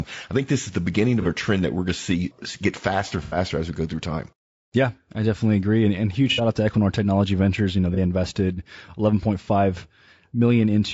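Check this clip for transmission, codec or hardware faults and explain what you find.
Two faults are audible in this speech: coding damage across the whole clip and five brief dropouts patched over by the decoder.

Low-delay AAC compression runs throughout, likely AAC-ELD at a low rate consistent with about 32 kbps. Its very short frames of around 30 ms cannot separate individual pitch harmonics finely, and the small bit budget spreads quantisation noise between them. The voice therefore sounds rough and grainy, with hiss filling the gaps between harmonics and a dulled, synthetic top band.

AAC frame loss with concealment occurs at 1.22 to 1.26 s, 3.23 to 3.37 s, 6.32 to 6.41 s, 7.94 to 7.99 s and 9.44 to 9.48 s. When frames fail to arrive, the decoder rebuilds the gap from the last good spectrum with randomised or interpolated content. The short gaps, fitting one lost frame each, come across as a quick smeared or phasey blip. 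The 3.23 s patch, fitting three frames, and the 6.32 s patch, fitting two, are longer noisy smears where the speech briefly loses definition.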